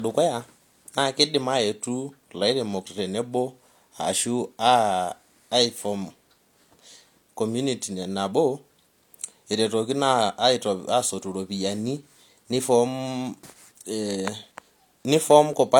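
Low-bitrate audio saved at a high bitrate runs through the whole speech clip. Nothing is present above 18.5 kHz, and the leftover artefacts of the first encoding point to a file that was likely first squeezed through a low-bitrate codec, something like HE-AAC at around 40 kbit/s, and then re-encoded as a high-rate MP3. The second, generous encode keeps every flaw the first one introduced, so the extra bits restore nothing.

Periodic USB or driver dropouts appear from 12.45 s to 15.53 s, with a gap every 1.02 s, about four in all. Each time, roughly a millisecond of audio is skipped outright rather than replaced with silence, which fits a bus or driver being stalled at a fixed interval by a background task. The missing slivers are heard as evenly spaced ticks in the speech, a regular rhythm that has nothing to do with the speech itself.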